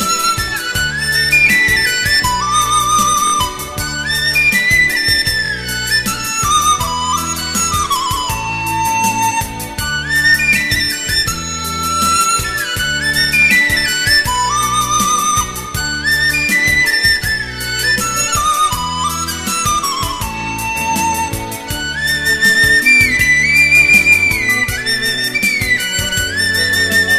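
At 3.27–3.32 s and 5.46–5.50 s, a repeated buffer occurs. A 23 ms piece plays twice more, fitting a 1024-sample buffer. Each is a brief stuttering buzz.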